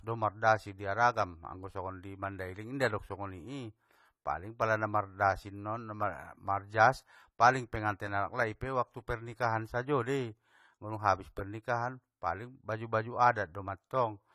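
Throughout, the audio was likely squeezed through AAC compression at a low bitrate, consistent with about 32 kbps AAC-LC, so the encoder discarded detail. The upper treble is cut away, and the codec damage is plainly audible as a dull, smeared quality across the speech.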